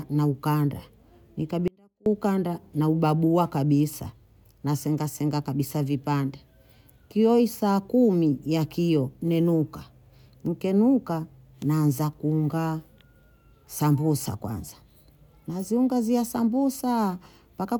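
At 1.68 s the speech cuts out abruptly and stays gone until 2.06 s, about 380 ms, before returning mid-flow. This is an audio dropout to a faint residue: the gap isn't silent, but only a faint sound remains, roughly 35 dB under the normal speech level. The hard edges at both ends distinguish it from a pause or fade. The likely cause is a brief loss of the wanted signal while the path downstream stayed live.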